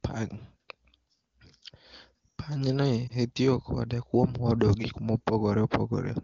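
At 3.08 to 3.12 s, one lost AMR speech frame of 20 ms makes the decoder reuse the previous frame's parameters at lower gain, producing a brief dip or warble.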